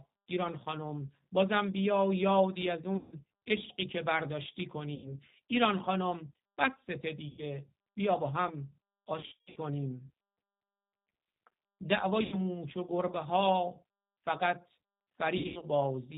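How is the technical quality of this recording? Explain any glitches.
The quality is poor: the speech passes through a low-bitrate phone codec and has six audible dropouts.

The G.729 codec runs throughout, at 8 kbit/s, in its G.729A form. Its damage is plainly audible. The codec rebuilds speech from a vocal tract filter, a pitch model and a few pulses per frame. It does not send the waveform itself. So the speech sounds rough and slightly synthetic. Nothing above 4 kHz survives, so it is dull and boxy.

VoIP packet loss, concealed by the speech codec, hits at six points:
2.97 to 3.15 s, with 150 ms lost.
4.95 to 5.16 s, with 90 ms lost.
7.29 to 7.43 s, with 90 ms lost.
9.20 to 9.58 s, with 270 ms lost in scattered gaps over 360 ms. The longest gap is 120 ms.
12.23 to 12.36 s, with 90 ms lost.
15.38 to 15.67 s, with 180 ms lost over 240 ms. The longest gap is 90 ms.

The losses come in 30 ms steps, which fits 30 ms packets. 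When audio goes missing, the decoder guesses. It repeats its last pitch and filter and lowers the level frame by frame. You hear a stretched, buzzy tone or coloured noise that fades. Each frame builds on the one before. So the speech stays weak or smeared for a moment after real packets return.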